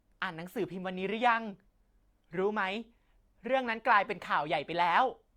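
Throughout the speech, the signal has likely been through transcoding between lossy codecs, an MP3 stage near 96 kbit/s followed by Opus at roughly 48 kbit/s. The second encoder spends its limited bits re-coding the first one's smearing and adds its own. The top end stops at the lower of the two cut-offs, and the two kinds of artefact sit together, heard at once.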